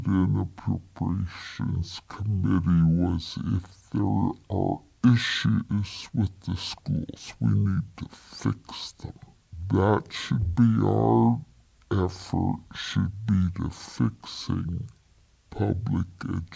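Throughout, the audio plays at half its intended rate with no conversion, a wrong sample rate that fits 32 kHz material played at 16 kHz, so everything runs at 0.5x speed and a full octave low.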